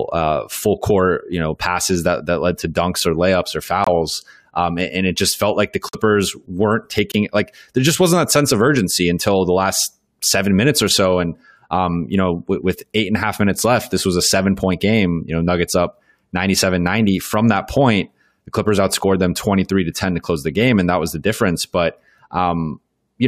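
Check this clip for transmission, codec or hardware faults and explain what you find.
Three short dropouts are present, all of the corrupt frame muted kind: damaged compressed frames were rejected by the decoder and replaced with silence, with timing preserved.

At 3.84 to 3.88 s, right after "dunks or layups or", a 42 ms hole that fits about two frames cuts in abruptly.

At 5.89 to 5.95 s, after "just felt like the", a 65 ms gap, again consistent with two lost frames.

At 7.12 to 7.16 s, just before "like there just wasn't", a 38 ms gap matching a single frame.

Each sounds like a tiny hole of silence that starts abruptly. On a waveform it is a near-flat line with sharp edges, and on a spectrogram it is a clean vertical blank band across all frequencies.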